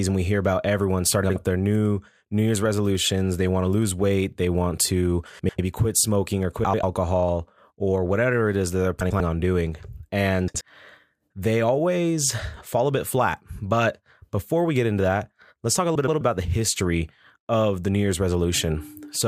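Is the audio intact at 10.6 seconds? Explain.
No. From 10.48 to 10.61 s the speech has frames out of order: two adjacent runs of about 64 ms each arrived swapped and were decoded in that sequence, so the stretch plays back half-first-half-last reversed. It comes out as a brief garbled flutter. Unlike a dropout or a repeated frame, nothing is missing or doubled and no time is lost, since the same sound is simply rearranged.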